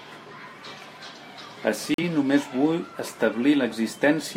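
A digital broadcast dropout occurs from 1.94 to 2.02 s, just before "només vull". The receiver lost valid data and muted, leaving a brief silent hole. About 43 ms of programme is missing, which fits a single lost frame, and the speech resumes afterward.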